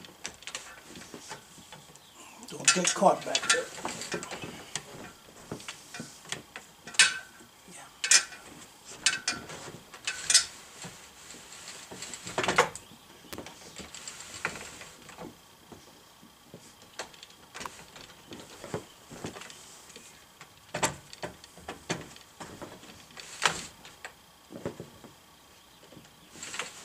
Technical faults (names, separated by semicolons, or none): electrical switching spike